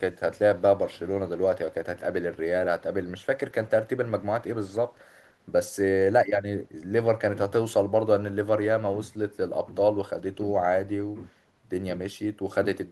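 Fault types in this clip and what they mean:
Echo leak: A faint, delayed copy of the speech surfaces briefly, from 4.94 to 5.0 s. It trails the original by 166 ms. It sits far below the speech. The likely cause is a loudspeaker end whose echo canceller let part of its microphone pickup through and sent it back. The scrap is short, and it rides on the Opus-coded call audio.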